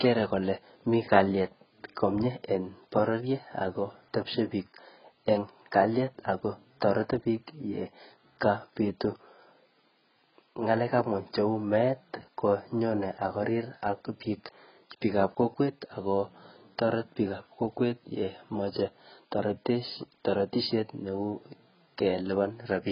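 From start to finish, the speech carries heavy damage that points to AAC compression, likely AAC-LC at a very low rate, around 12 kbps. Nothing is left above 5.3 kHz. The encoder has dropped its cut-off to save bits, so the top of the spectrum is simply gone. What remains is coarsely quantised. Sibilants turn fizzy. Sustained vowels warble. The whole sound is dull and smeared.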